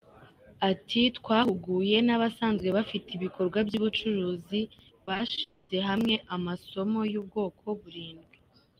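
From 5.05 to 5.39 s, repeated packet loss breaks up the speech. Five short gaps, none longer than 20 ms, are each patched by extending the preceding sound, so about 100 ms of the stretch is filler. The result is choppy, robotic speech with fragments missing.

From 5.43 to 5.71 s, the speech stops and is replaced by a smeared continuation of the last sound that fills the whole 260 ms without falling to silence. When the speech resumes, that portion is gone. A long network dropout is the likely cause.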